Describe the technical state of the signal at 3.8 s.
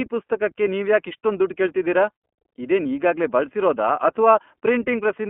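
iLBC codec coding runs through 3.8 s: each 30 ms frame is coded independently, band-limited to 200 Hz–3.4 kHz, giving plainly rough, synthetic speech, consistent with 13.33 kbps.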